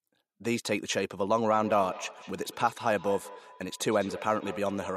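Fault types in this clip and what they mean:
Feedback echo between two devices: from 1.5 s the speech returns roughly every fifth of a second, at about -15 dB, showing on a spectrogram as faint, evenly spaced copies of each syllable.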